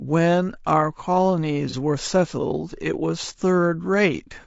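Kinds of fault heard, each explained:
Low-delay AAC compression: The speech is rough and grainy throughout, with noise filling the gaps between harmonics and a thin, synthetic-sounding top band. This likely comes from AAC-ELD at a low bitrate, around 32 kbps. Its short frames blur pitch detail, which sets it apart from ordinary AAC artefacts.
AAC frame loss with concealment: At about 1.70 to 1.75 s there is a short smeared, noisy patch. The decoder filled in about 30 ms of missing audio from the last good spectrum, which fits one lost frame. Unlike a dropout, there is no silence, only a brief phasey blur.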